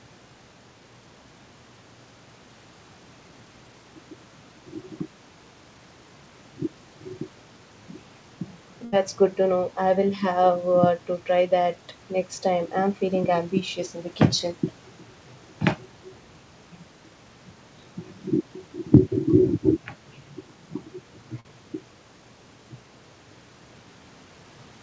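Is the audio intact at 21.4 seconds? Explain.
No. Short concealed packet loss hits from 21.40 to 21.45 s. About 40 ms of audio arrived too late to decode, so the receiver extended the preceding sound to bridge the gap before blending back, which leaves a brief smear or wobble.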